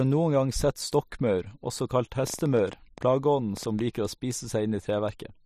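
From 2.27 to 3.80 s, a train of clicks, roughly fifteen at about 7.9 per second, irregularly spaced and peaking a few dB above the speech, likely from electrical interference.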